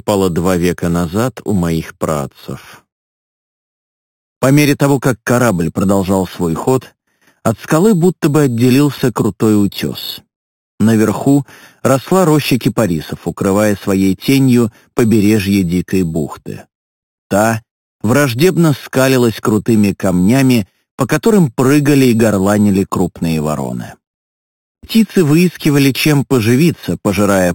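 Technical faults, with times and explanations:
Throughout, imaging from sample-and-hold upsampling. A bright metallic fizz sits over the sound and rises and falls with its level. The rate was raised by repeating each sample, with no smoothing filter afterwards. That leaves mirror copies of the spectrum above the original band. The lowest copy fills 4 to 8 kHz, about 18 dB below the wanted sound. It moves opposite to the pitch. This points to material first sampled at 8 kHz.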